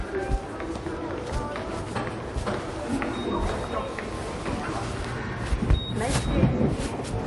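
From start to finish the sound carries plainly audible MP3 compression damage. Nothing is heard above 11.3 kHz, so the top end stops at a hard ceiling and the audio sounds dull. Below that, weak detail comes and goes from moment to moment, leaving a watery, swirling texture. The likely cause is an encoder short of bits, throwing away the treble and the quieter frequency lines. The damage fits a low bitrate of around 48 kbps.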